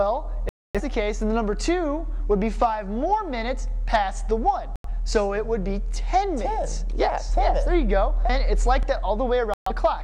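At 0.49 s, 4.76 s and 9.54 s the sound abruptly mutes and then resumes, a digital broadcast dropout. The receiver lost valid frames and went silent until good ones returned, so what was sent in each gap never arrives. The holes last about 256 ms, 85 ms and 128 ms, multiples that fit frames of roughly 43 ms. On a waveform each is a flat line. A spectrogram shows clean, full-band vertical gaps with hard edges.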